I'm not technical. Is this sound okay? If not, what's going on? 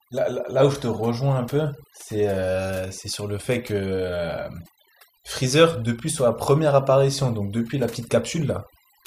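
No. The whole recording has overdone noise removal: a cleanup tool set far too strong has treated faint parts of the speech as background noise and switched them off along with it. The gaps between phrases drop away and break up into little twinkling specks. Unlike ordinary muffling, which just dulls everything evenly, this keeps some brightness but leaves the background warbling and broken up.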